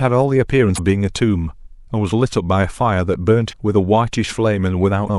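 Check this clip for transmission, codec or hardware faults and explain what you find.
The clip has one recurring codec-side fault, damaged data in a compressed stream, occurring three times in this speech: 0.75–0.79 s, 3.49–3.53 s and 5.06–5.10 s. Each lasts about 40 ms. Corrupted bytes inside the encoded stream make the decoder misread those frames and lose sync until it finds a valid frame header. The result is a brief chirp, squawk, click or short hole.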